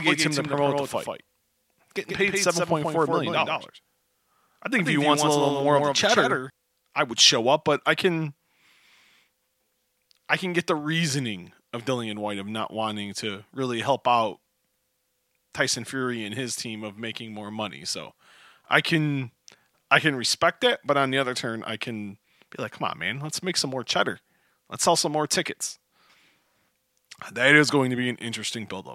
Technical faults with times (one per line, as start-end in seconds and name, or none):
0.00-6.50 doubled audio track